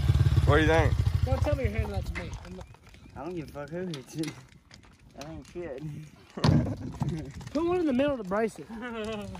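No technical faults are audible anywhere in the recording.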